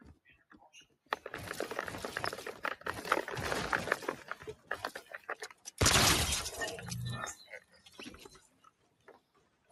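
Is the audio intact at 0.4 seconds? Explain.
No. From 0.14 to 0.54 s, sound is cut by the noise suppressor, which treats it as noise and pulls it down by about 16 dB, so the waveform thins and the spectrogram fades. Throughout, a noise suppressor applied to music or sounds swings the level by around 20 dB, leaving sinking held notes and clipped tails visible on the waveform.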